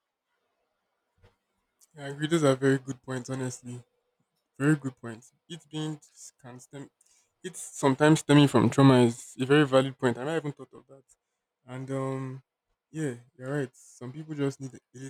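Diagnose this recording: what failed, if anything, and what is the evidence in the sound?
Listening through the speech recording, nothing stood out as a failure at any stage of the chain.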